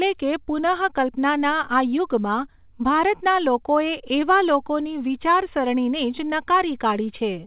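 No faults heard in the speech; the call path carries it as expected, its G.711 mu-law coding leaving nothing above 4 kHz.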